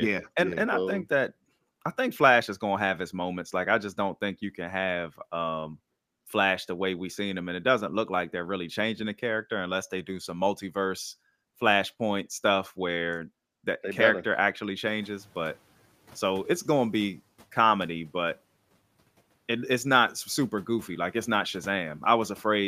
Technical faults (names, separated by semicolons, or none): noise suppressor catching up